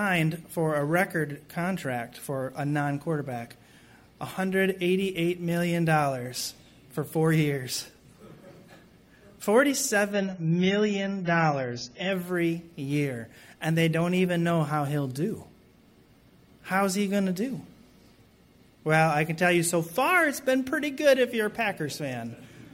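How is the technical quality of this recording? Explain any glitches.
One glitch is audible. From 10.12 to 12.12 s, the adaptive stream drops to a lower bitrate. Treble vanishes above 7.1 kHz, as if switching to roughly 16 kbit/s. The change is abrupt, gapless, and sounds dull and smeared.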